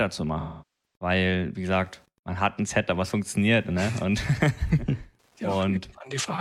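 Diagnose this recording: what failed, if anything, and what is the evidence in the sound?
Wi-Fi interference in the analogue wiring: a faint tick every 102.4 ms runs throughout, well below the speech. It is rectified beacon bursts, and its regular clicks set it apart from mains hum.

AAC frame loss with concealment at the codec stage: from 0.39 to 0.95 s, about 427 ms (roughly ten frames), the speech smears, decays to a very faint noise floor and fades back, unlike a hard-edged dropout.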